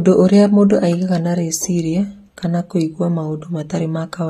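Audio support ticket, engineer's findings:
Speech audio dull and smeared for the whole clip, with warbling on sustained sounds and fizz on sibilants. Nothing above 14.7 kHz. Likely AAC compression: AAC-LC at a low rate, consistent with about 32 kbps. The encoder drops the upper band and starves the spectral lines it keeps, so detail thins and texture wobbles frame to frame. Damage plainly audible.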